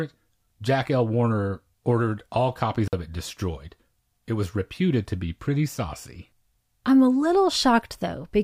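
A speech recording with one intermittent contact fault. Right after "ordered all copies", at about 2.86 s, the signal drops out for roughly 50 ms and comes back by 2.93 s, just before "it destroyed". There's crackle as it cuts and again as it returns, with faint hiss in the gap. That's the classic sign of a loose cable or plug briefly losing its connection and then snapping back.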